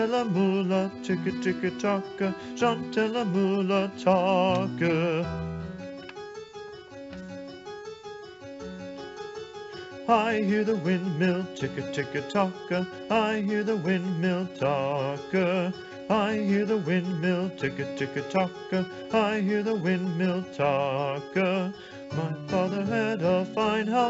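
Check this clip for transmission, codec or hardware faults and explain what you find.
No faults turn up in this clip; the signal carries the ordinary character of a wideband call path, with its content ending at about 7 kHz in the way a G.722 link passes audio.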